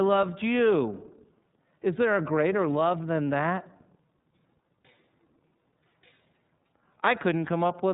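Throughout, the speech carries iLBC codec damage: band-limited to nothing above 3.8 kHz, with each frame coded independently, plainly audible roughness, consistent with 30 ms frames at 13.33 kbps.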